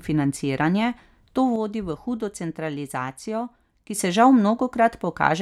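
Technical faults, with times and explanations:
1.56 to 3.96 s, one channel drops out: the speech falls abruptly by about 6 dB for 2.4 s, recovering just before "se žal". The likely cause is one stereo channel going silent, so the mono sum carries only half the shared signal's amplitude.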